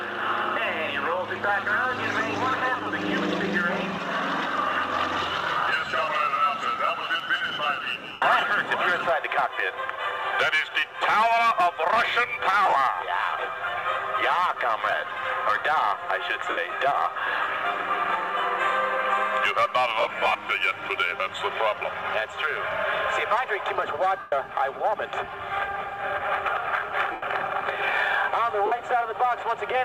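The sound has lost LE Audio frames at 8.12, 12.66, 14.91, 16.50, 20.00, 24.19, 27.12 and 28.66 s, with gaps from about 20 to 130 ms; the 20.00 s one is scattered over 0.35 s. The decoder fills each gap with a re-signed copy of the last spectrum, so tones smear into noise.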